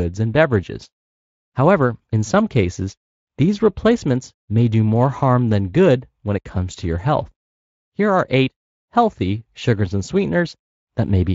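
No technical faults can be heard anywhere in the speech.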